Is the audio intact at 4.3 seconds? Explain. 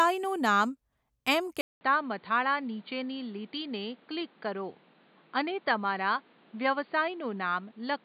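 No. From 1.61 s to the end, the input likely switched to a poorer device: after a 200 ms gap, the speech is about 5 dB quieter, cut off above 4.7 kHz, and carries new background noise.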